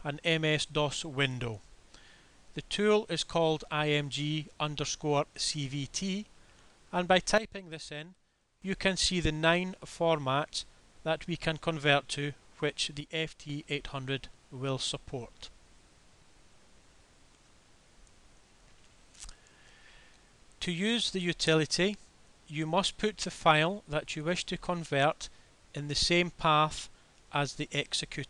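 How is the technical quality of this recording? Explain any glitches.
The recording has two sudden gain jumps. From 7.38 to 8.62 s the level drops by about 13 dB, and from 13.01 to 13.49 s by about 6 dB. Sound and background noise fall together, then snap back. The likely cause is a digital gain change applied instantly, without a ramp.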